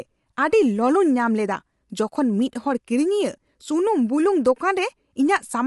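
Throughout the speech, the voice sounds rough and grainy, with noise filling the gaps between harmonics and nothing above 11.6 kHz. This is likely low-delay AAC compression. Its short frames resolve pitch poorly, and the damage fits AAC-ELD at around 32 kbps.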